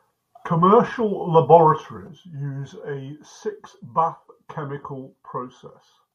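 A digital gain setting was likely applied without a ramp at 2.07 s, a sudden gain jump that drops the speech and its background noise together by about 8 dB until the end.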